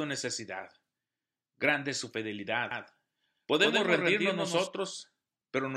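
This is a speech clip with a doubled audio track from 2.71 s to 4.67 s, starting right after "su fidelidad". Over that span a second full-band copy of the speech runs roughly 150 ms behind the original, a few dB quieter. It has no decay or room colouring, so it reads as a hard, flat echo. It cuts in and out abruptly at both ends. The likely cause is the same signal reaching the mix twice, once through a slower path or an edit left out of alignment.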